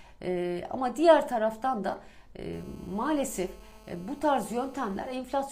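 From 2.53 to 5.15 s a hard, raspy GSM phone buzz sits about 26 dB below the signal, pulsing at 217 Hz with dense harmonics, unlike smoother 50/60 Hz mains hum.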